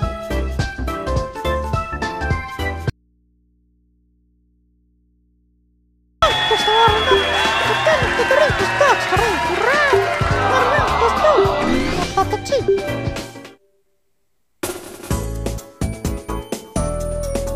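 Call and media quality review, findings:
Audio dropout to a faint residue, 2.90–6.22 s (3.3 s). Likely source feed lost ahead of a path that stays live and open. Sound cuts out abruptly; the gap holds only mains hum, about 40 dB below normal signal level.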